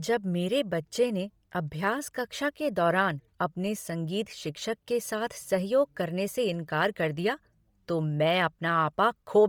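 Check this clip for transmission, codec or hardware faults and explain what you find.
There's one fault, and it runs the whole clip. The speech has a breathy, grainy top, likely from heavy Bluetooth LC3 compression consistent with 32 kbps, with upper frequencies zeroed and noise-filled in 10 ms frames.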